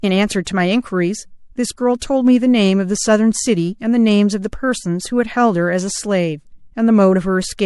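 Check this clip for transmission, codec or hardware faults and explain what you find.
Two brief pre-echo events are audible in the speech. Pre-echo at 0.45 s and from 1.99 to 2.02 s: quantisation noise from a roughly 36 ms transform block, which never switched to short blocks, smears about 20 ms of hiss, about 22 to 23 dB up, ahead of each attack. A spectrogram shows a broadband haze just before each onset.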